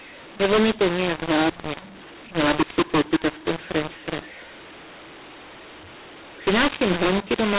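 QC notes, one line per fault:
Throughout: mu-law and A-law mixed up. The speech sounds harsh and gritty, with loud passages distorting and softer ones jumping unevenly in level, and the pauses fill with a hiss instead of falling silent. The audio was encoded with G.711 mu-law but decoded as A-law, so each 8-bit code maps to the wrong level on the logarithmic scale and near-silent samples land well above zero. The telephone band itself, topping out at 4 kHz, points to 8 kHz sampling.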